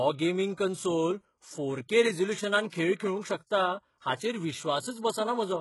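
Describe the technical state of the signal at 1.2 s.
At 1.2 s the speech has the same heavy damage as the whole clip, likely from HE-AAC compression. The treble is rebuilt from copied lower bands, so s sounds come out gritty and lispy, nothing reaches above 11.5 kHz, and the grain suggests roughly 12 kbps.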